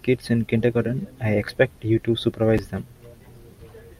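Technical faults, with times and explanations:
2.58 s, chunks out of order: a 5.33 ms chunk plays one slot late, after its neighbour; the three hard joins make a brief garbled moment.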